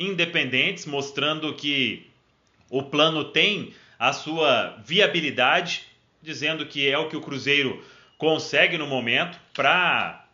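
No technical faults can be heard anywhere in this clip.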